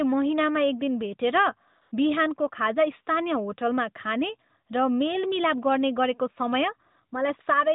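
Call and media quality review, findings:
AMR comfort noise, 1.82 to 1.92 s: real background replaced by smooth synthetic noise for 100 ms. Sender flagged silence, stopped speech frames; receiver generated noise from coarse level/spectrum description over the narrowband AMR path.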